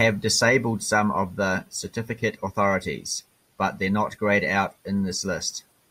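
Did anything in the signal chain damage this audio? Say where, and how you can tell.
No, nothing in the signal chain damaged this audio.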